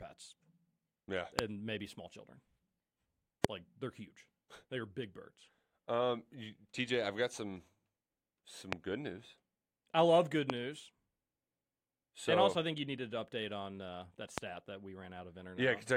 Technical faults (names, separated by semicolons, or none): loud pop